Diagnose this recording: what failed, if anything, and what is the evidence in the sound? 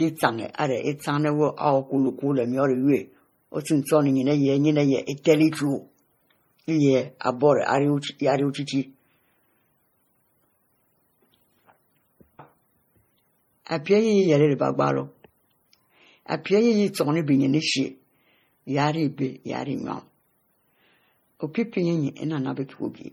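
The failure is at the codec stage, and the cause is likely transcoding between lossy codecs. Throughout the speech, two layers of coding artefacts sit together, consistent with a low-bitrate MP3 re-encoded as WMA. The second encoder spends its bits preserving the first encoder's artefacts and adds its own. Nothing is present above 20.1 kHz.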